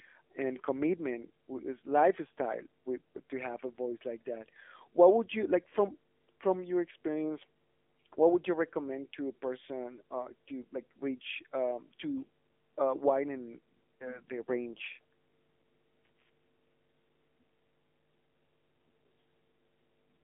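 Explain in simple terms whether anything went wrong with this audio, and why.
Two things went wrong, and both last from start to finish.

There is mains hum: a steady low 50 Hz drone from the power supply leaking into the recording, loud enough to sit clearly under the speech.

The speech also went through the AMR narrowband mobile codec, like an old phone call. Everything above about 3.6 kHz is gone, so the voice sounds muffled, buzzy and somewhat robotic.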